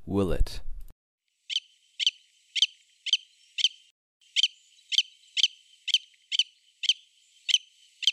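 At 3.90 s the sound drops abruptly into silence, holds there until 4.21 s, then picks up exactly where it broke off. This is a rebuffering stall: playback exhausted its downloaded audio and paused for more, adding about 311 ms without losing anything.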